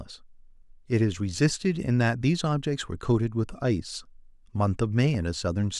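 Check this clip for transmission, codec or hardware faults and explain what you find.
One hardware fault is present: a single loud pop from 5.15 to 5.17 s, near the end of the speech. It is a brief, sharp transient that peaks roughly 5 dB above the speech level, and the talking continues beneath it without interruption. The likely cause is a sudden voltage step or pulse, from a connector, switch, static discharge or driver glitch, entering the signal chain. The downstream circuitry shapes that pulse into a short thump-like click.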